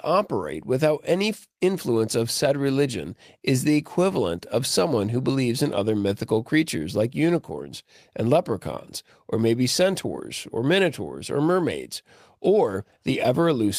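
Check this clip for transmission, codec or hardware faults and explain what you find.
Nothing in this speech recording points to a problem with how it was sent, encoded or captured. No disturbance in the audio can be traced to the signal chain.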